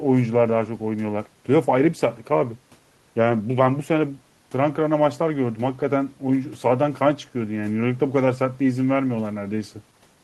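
No technical faults can be heard anywhere in the speech.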